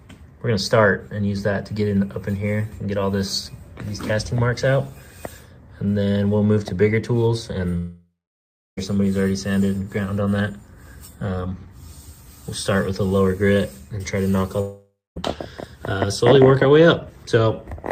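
At 7.77 s the sound smears into a fading buzz, falls silent for about 0.66 s, and resumes at 8.79 s with roughly a second gone. At 14.61 s the same happens more briefly: 0.24 s of silence, back by 15.18 s. Both are likely long network dropouts, where the receiver stretched the last audio until it ran out.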